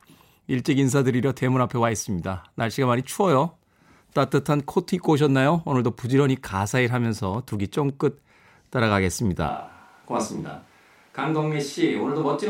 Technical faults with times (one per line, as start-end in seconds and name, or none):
6.51-7.90 train of clicks
9.50-12.49 switch to a distant microphone